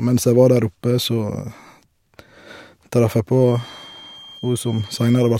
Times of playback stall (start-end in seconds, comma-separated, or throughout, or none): none